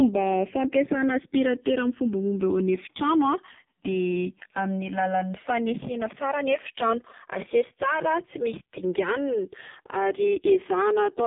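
It's a speech recording, and two faults run through the whole thing. The first is channels drifting apart. The left and right sides come from devices on separate clocks, running a couple of hundred parts per million off from each other, so the delay between them creeps up to a few milliseconds by the end. Summed to mono, that sliding offset drags comb-filter notches slowly across the spectrum, and you hear it as a gradual flanging sweep through the clip. The second is the AMR narrowband mobile codec, and it's badly hit. The band is squeezed to roughly 150 Hz to 3.6 kHz, with nothing at all above 3.7 kHz, so everything sounds muffled and phone-like. The heavy damage gives the voice a buzzy, synthetic edge from the pulse-driven vocal tract model, which points to AMR-NB running near its lowest bitrate, around 5.15 kbps.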